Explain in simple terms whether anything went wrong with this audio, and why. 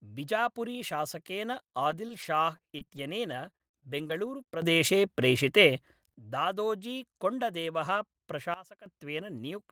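At 1.53 to 1.55 s, a lost packet rebuilt from error correction: a 20 ms piece was replaced by a rougher backup copy, so the speech briefly sounds grainier but never drops out.

From 1.91 to 4.47 s, repeated packet loss (robotic sound): ten separate holes, the longest 44 ms, were patched by stretching the previous sound. Unlike the single rebuilt packet, this repeats and turns the speech choppy, with pieces missing.

At 4.62 s the sound jumps suddenly louder until 6.14 s, and at 8.54 s it drops much quieter until 8.86 s. Both are sudden gain jumps, likely from a volume setting applied instantly instead of gradually. Speech and background change level together and nothing goes missing, which sets them apart from the packet loss.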